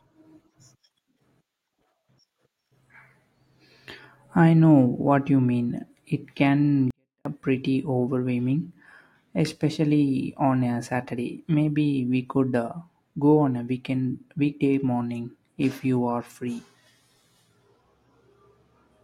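From 6.91 to 7.25 s, just before "uh pretty overwhelming", there's a 24-bit alignment error: low-byte samples read as 32-bit, so the speech drops about 48 dB, clean but nearly silent.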